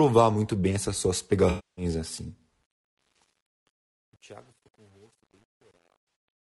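Throughout the clip the speech carries plainly audible codec damage. The roughness and graininess most likely come from low-delay AAC compression, AAC-ELD at a rate that fits about 32 kbps. This coder works on short frames with a low-delay window, and at this rate it has too few bits for the spectrum. Noise fills the gaps between harmonics, and the top band is coarsened or rebuilt.

From 1.49 to 1.85 s, just after "muito bem essas suas", there is AAC frame loss with concealment. About 280 ms of frames is missing. The decoder fills the hole from the last good spectrum, either by scrambling signs or by interpolating energy. The patch sounds smeared, noisy or phasey in place of the real signal, and it may dip and fade back in if the concealment decays.

From 2.63 s to the end, a fade shows truncation distortion. The gain stage keeps only about 9 bits and adds no dither. As the level drops toward the smallest step, the waveform becomes a few coarse square steps, and the quiet tail turns gritty. 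This is at its worst from 3.33 s onward.

Inside that fade, from 6.07 to 6.15 s, a second AAC frame loss with concealment covers about 80 ms. The decoder again fills the gap from the previous spectrum, leaving a brief smeared or noisy patch.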